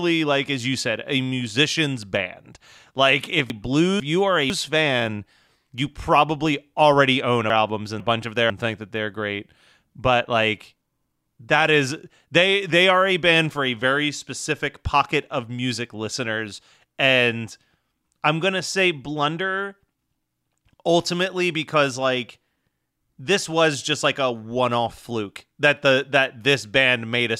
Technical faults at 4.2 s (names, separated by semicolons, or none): chunks out of order